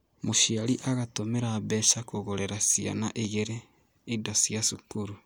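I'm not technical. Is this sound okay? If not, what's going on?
Yes, no faults here.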